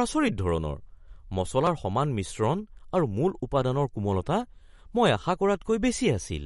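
Speech with a watery, swirly texture throughout, likely from MP3 compression at a low bitrate near 48 kbps; the spectrogram shows a hard ceiling at 11.2 kHz and flickering, patchy high bands. At 1.67 s a small jump in the sound points to a dropped buffer (overrun), with roughly 10 ms skipped, visible as a sudden discontinuity in the waveform.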